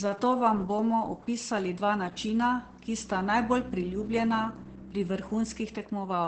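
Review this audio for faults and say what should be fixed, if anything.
The whole clip has heavy Opus voice compression, using its SILK linear-prediction coder. Nothing comes through above about 8.6 kHz, so the speech sounds muffled, and the coarsely coded excitation gives it a hoarse, slightly robotic edge. That fits a bitrate of around 10 kbps. To avoid it, encode at a noticeably higher bitrate or work from the uncompressed original.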